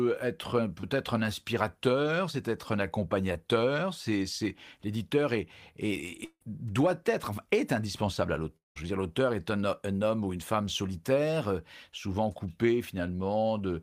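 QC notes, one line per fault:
0.81–0.85 s and 3.33–3.37 s (after "inspirateur c'est être un"), short concealed packet loss: about 20 ms smeared over by continuing the prior sound, a brief wobble with no gap, unlike a dropout.
6.25–6.43 s, long network dropout: the sound stretches into a fading buzz, then about 60 ms of silence before "doit être est indispensable". Roughly 160 ms is simply missing, likely from a network stall.
8.57–8.78 s, long network dropout: after "être est indispensable à", a brief fading tail gives way to about 180 ms of silence. Speech resumes at "veux dire l'auteur est", with about 200 ms lost, not smoothed over.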